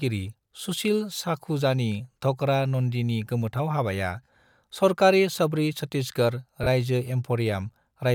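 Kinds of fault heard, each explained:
Lost LE Audio frames: at 6.63–6.67 s, a 30 ms dropout is filled by reusing the last spectrum with random signs, briefly smearing the speech into noise.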